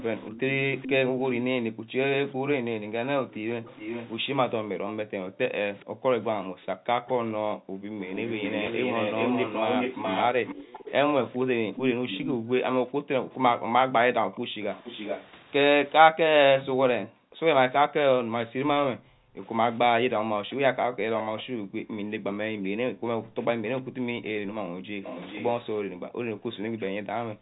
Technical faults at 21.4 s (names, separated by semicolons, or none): background gated by the echo canceller; echo leak